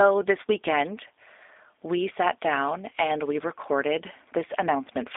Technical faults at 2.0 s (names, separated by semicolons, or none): G.729 codec